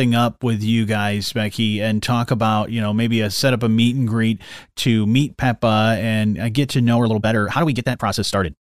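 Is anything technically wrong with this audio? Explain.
Yes. A time-stretched section runs from 6.93 s to the end at 8.64 s, starting right after "and uh get to". The audio is likely stretched by software that squeezes the passage to 1.73 times normal speed while holding the pitch steady, dropping short pieces of the signal to shorten it. The pace jumps abruptly faster while the pitch stays the same, and the speech sounds rushed.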